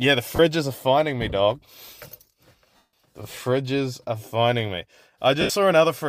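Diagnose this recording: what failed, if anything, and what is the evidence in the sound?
Three short dropouts break the speech into a hissy, noise-like smear: at 0.36 to 0.39 s (30 ms), at 2.76 to 2.89 s (165 ms, where the smear fades gradually toward silence), and at 5.41 to 5.50 s (82.5 ms) right after "fridges are finding me". This is lost LE Audio frames on the Bluetooth link. The durations fit runs of missing 7.5 ms frames, which is likely an LC3 stream. The decoder repeated the last spectrum with scrambled signs and then faded it out.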